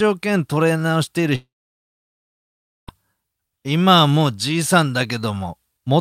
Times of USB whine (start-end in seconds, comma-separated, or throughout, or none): none